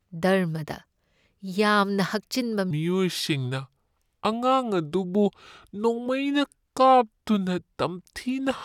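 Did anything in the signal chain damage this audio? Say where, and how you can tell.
Yes. From 2.71 s to the end, a section plays at the wrong speed. The speech there drops to about 0.76 times its proper rate. Pitch falls with it, by roughly five semitones, so the voice turns deep and slow. Speed and pitch shift together at one moment, which points to a clock mismatch, not pitch processing. The likely stage is editing or playback, where that stretch was read against the wrong sample clock.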